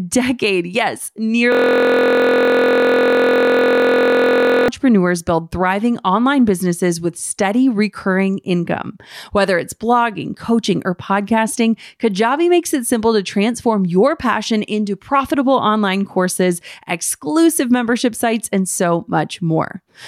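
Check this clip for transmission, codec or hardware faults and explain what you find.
One fault is present. From 1.52 to 4.68 s, a system hang loop occurs. A 23.22 ms piece repeats over a hundred times, fitting a 1024-sample buffer, giving a steady 43.1 Hz buzz.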